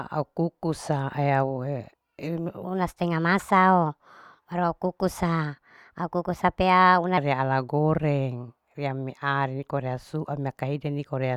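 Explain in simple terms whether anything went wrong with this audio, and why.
Between "eyau inu" and "re ala goreng" (2.64 to 7.18 s), the speech turns rushed and higher-pitched: a section at the wrong speed, likely playing 1.18 times too fast.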